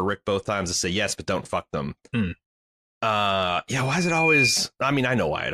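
Speech, with a loudspeaker feedback squeal from 3.77 to 4.62 s. A single tone at 2.4 kHz swells over about half a second to roughly 5 dB above the speech. The microphone is hearing its own loudspeaker, and the loop gain exceeds one at that frequency.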